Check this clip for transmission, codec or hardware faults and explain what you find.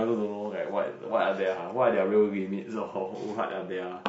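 One codec fault runs through the whole speech clip: plainly audible low-delay AAC compression, with the voice sounding rough and grainy from start to finish. This is likely AAC-ELD, the low-delay coder used for video calls, and the damage level fits a bitrate around 32 kbps. Its short frames, about 10 ms, get few bits each at this rate, so the coder quantizes coarsely and leaves a noisy fill between harmonics instead of clean tonal structure.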